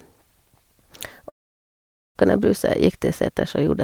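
A long network dropout runs from 1.29 to 2.17 s. The speech cuts off, a brief fading continuation of the last sound gives way to silence for about 0.84 s, and roughly 0.86 s of speech is missing, likely because incoming packets stopped arriving.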